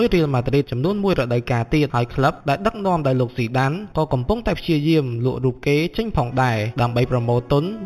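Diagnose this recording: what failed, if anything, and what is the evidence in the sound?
A dulled top with a faint metallic shimmer throughout, from imaging from linear upsampling: straight-line interpolation, fitting an 8 kHz source raised to 44.1 kHz, leaves mirrored images across 4–8 kHz, roughly 25 dB down.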